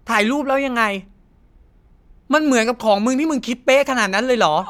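No technical faults are audible anywhere in this speech recording.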